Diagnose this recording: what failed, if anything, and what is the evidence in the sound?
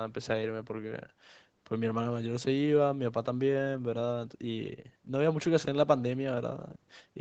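Nothing failed in this recording; the speech passed through normal call microphone processing, with the lowest bass filtered out and nothing above 8 kHz, which is expected behaviour and not a fault.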